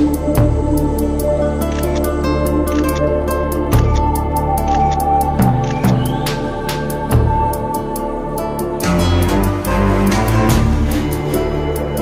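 No technical faults can be heard at any point, so there is nothing to describe in time order.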